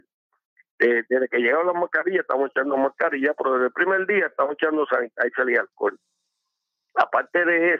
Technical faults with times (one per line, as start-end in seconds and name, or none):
none